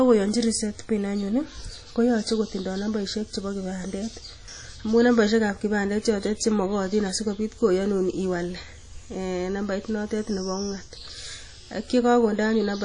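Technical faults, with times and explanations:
Throughout, WMA compression: the speech has likely passed through a low-bitrate Windows Media Audio encoder. Its long transform blocks smear quantisation error over tens of milliseconds and drop weak spectral detail, to a degree that fits a bitrate near 32 kbps. The damage is plainly audible as a ringing, washy halo around syllables and a hiss that swells and fades with the speech, with nothing at all above 10.1 kHz.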